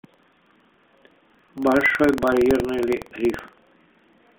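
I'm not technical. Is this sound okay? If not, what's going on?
No, not quite. All the way through the speech there's a steady rattly buzz, about 21.5 times a second, and that's buffer tearing. The software feeding audio to the hardware has slipped out of step, so in every chunk a tiny slice is replaced by sound from about a tenth of a second earlier, with a hard join at each end. That rate fits a 2048-sample buffer. The narrow phone-line sound, with nothing above about 3.6 kHz, comes from the mobile codec and is just how that path sounds.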